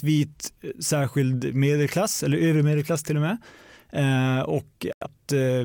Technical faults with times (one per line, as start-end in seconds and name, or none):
4.92-5.07 digital broadcast dropout